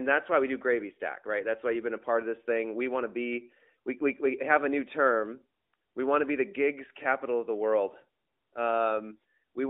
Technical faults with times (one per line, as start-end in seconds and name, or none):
none